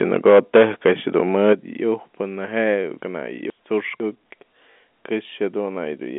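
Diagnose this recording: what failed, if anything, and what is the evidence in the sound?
Between 0.14 and 0.91 s, and again from 1.47 to 1.53 s, the loudest peaks take on a harsh, crackling edge. The first stretch is the worse of the two: peaks run roughly 8 dB past the converter's limit, with something like 7 percent of samples flattened. The second overshoots by about 3 dB, with around 4 percent of samples flattened. This is most likely microphone overload at the converter, where input gain set too high squares off the waveform tops. Level loss alone would not add that crackle.

The sound drops by about 2 dB at 0.3 s, inside the first overloaded stretch, and by about 7 dB at 1.53 s, right as the second distorted burst ends. Each drop is a single instant step, and voice and background fall together. That points to the microphone volume being stepped down, likely by the call software's automatic gain control reacting to the clipping. 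A fade would glide over time, and an overload would distort the sound without lowering its level.

From 3.0 to 4.0 s the sound jumps and garbles. The span divides into two 500 ms blocks, and the block that belongs first plays one chunk late. These are chunks out of order at the driver or buffer stage. Nothing goes missing, and the content simply arrives in the wrong sequence. That separates it from packet loss, where sound is replaced by filler.

At 4.72 to 4.76 s a brief robotic stutter replaces 40 ms of audio, which fits two lost 20 ms packets. The receiver repeated the last good packet to fill the gap. Because the same 20 ms packet repeats, the run buzzes at about 50 Hz. This is packet loss with the last packet repeated, a network fault. It is much shorter than the jumbled span, and the gap is filled with copies rather than the original sound in a different order. Throughout, the sound is held to the telephone band of 200 Hz to 3.5 kHz carried by the G.711 coding.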